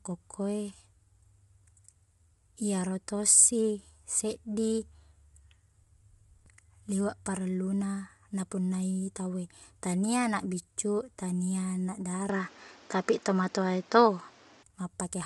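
Throughout the speech the tone is rough and grainy, with noise filling the gaps between voice harmonics and nothing above 11.6 kHz. This is plainly audible codec damage, likely from low-delay AAC compression (AAC-ELD). Its short frames resolve pitch harmonics poorly, and the degree of damage fits a bitrate of around 32 kbps. At that rate the coder cannot describe the harmonic structure cleanly, so the voice takes on a coarse, slightly synthetic texture.

From 12.29 s to 14.63 s, right after "biccu tania anak", the sound abruptly turns duller and narrower, with nothing above 7.5 kHz. The change comes with no silence, and the level shifts by around 5 dB. A new background noise floor also appears, roughly 30 dB below the signal. At 14.63 s the wider band returns. The likely cause is the input switched to a poorer device, such as another microphone or a headset's call profile, for that stretch.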